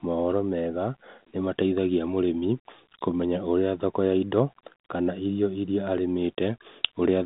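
No technical faults are audible.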